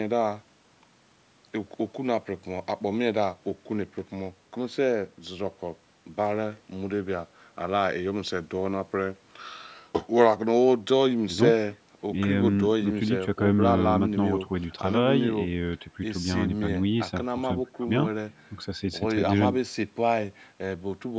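No technical faults are audible in this speech; it has the normal sound of call microphone processing, with the lowest bass trimmed and nothing above 8 kHz.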